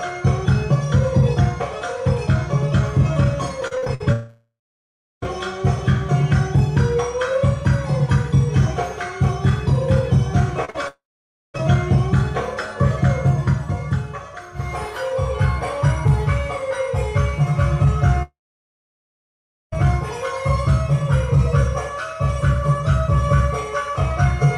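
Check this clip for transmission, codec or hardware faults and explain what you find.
Transmission faults are present: two bursts of repeated packet loss and three long network dropouts.

Repeated packet loss (robotic sound) occurs from 3.67 to 4.04 s, with seven short holes up to 53 ms each, nearly half the span concealed, and more lightly from 10.65 to 11.61 s. Each hole is patched by extending the preceding sound, giving a choppy texture.

Long network dropouts occur at 4.12 to 5.24 s, 10.88 to 11.56 s and 18.23 to 19.74 s, lasting about 1.1 s, 0.66 s and 1.5 s. The sound smears into a fading buzz, then goes silent before resuming with material missing, likely from audio packets failing to arrive.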